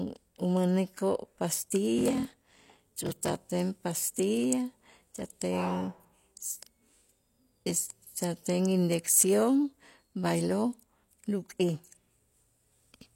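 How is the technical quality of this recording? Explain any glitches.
The speech has one defect, a block size mismatch (padded), from 1.96 to 3.46 s. One stage writes shorter blocks than the next reads, here consistent with 1024-sample writes, and each shortfall is zero-filled. The inserted gaps produce a 41.7 Hz buzz, and the speech slows to 0.889 speed with its timbre kept.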